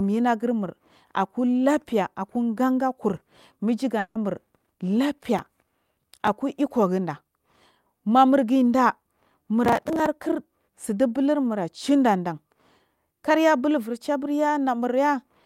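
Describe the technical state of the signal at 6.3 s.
At 6.3 s the signal is just coming out of a burst of processor overload crackle that runs from 5.39 to 6.28 s: a gritty, tearing roughness laid over the speech, ending abruptly as the load eases. It comes from the processor repeatedly failing to deliver buffers on time, which fits buffers of around 5 ms. Around thirty were missed, each filled with stale, hard-edged audio rather than fresh signal.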